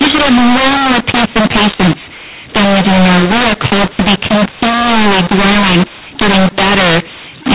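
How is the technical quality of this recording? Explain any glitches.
The quality is poor because of a decoding error. Mu-law and A-law mixed up, throughout: telephone speech encoded as mu-law is decoded as A-law, scrambling sample levels. The speech sounds harsh and distorted, and pauses fill with noise, within the narrow G.711 band that stops at 4 kHz.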